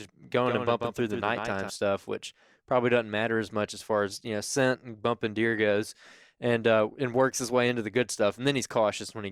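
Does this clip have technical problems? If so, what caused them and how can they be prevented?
Yes. From the start to 1.7 s, just before "stuff which probably doesn't", the speech has a doubled audio track: a second full-band copy trails by around 150 ms, roughly 5 dB quieter, with no reverberant tail, then cuts off abruptly. A second, slower capture path is the likely cause. Prevent it by routing only one input into the mix and muting monitoring returns or duplicate sources.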